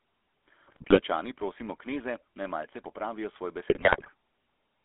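The whole clip carries the GSM full-rate codec. The speech has a buzzy, gravelly roughness. The codec models the vocal tract and drives it with a sparse train of regular pulses, so fine detail in the voice is lost. The damage is plainly audible. The band runs only from about 300 Hz to 3.5 kHz, so the sound is thin and boxy. The texture fits a 13 kbps stream.

From 0.63 to 1.01 s come GSM bit errors, just before "prosimo kneze naj malce". Corrupted bits reach the decoder. Bad filter, pitch and gain values bend the spectrum and throw the level around frame by frame. The speech breaks into squawks, pops and gargling. From 3.70 to 4.10 s it happens again, just after "naj malce popravijo svoj". This burst has a higher error rate, around 4 percent against about 2 earlier.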